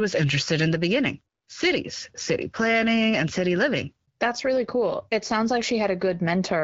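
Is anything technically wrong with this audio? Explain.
No, nothing technically wrong here.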